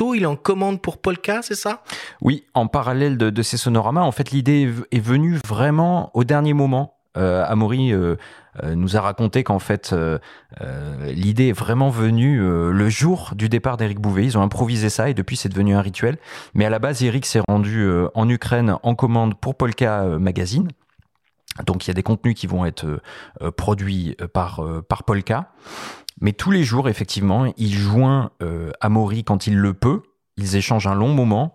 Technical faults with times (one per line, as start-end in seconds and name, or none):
5.41-5.44 gap between stream segments
17.45-17.48 gap between stream segments